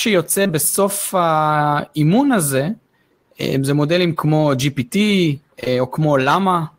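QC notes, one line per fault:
5.61–5.71 s, short concealed packet loss, twice (the second at 5.64–5.68 s): about 20 ms went missing each time. The decoder filled the gaps by extending the preceding sound, 13 ms and 18 ms, then blended back. This heard as a brief smear.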